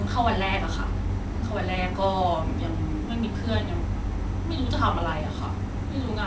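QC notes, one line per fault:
Nothing to flag on this one, since the speech arrives over a WebRTC call path with no content above 8 kHz, which fits a G.722 link at 64 kbps and is just how that kind of line sounds rather than anything gone wrong.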